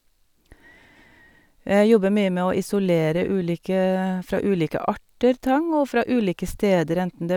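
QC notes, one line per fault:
No faults were heard in this speech clip. Nothing needs logging.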